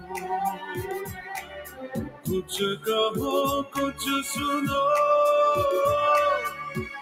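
The audio has a noise suppressor applied to music or sounds, a processor built for speech that treats steady tones, ambience and decay as noise. Its gain swings by about 15 dB, so the level sinks whenever material holds or fades rather than strikes. This produces sound cut by the noise suppressor at 0.00–0.31 s (drops of about 12 dB), 0.53–2.51 s (about 15 dB, the longest and deepest), 3.64–4.00 s (about 14 dB) and 6.50–7.01 s (about 8 dB), where sustained or decaying content is pulled down or cut short.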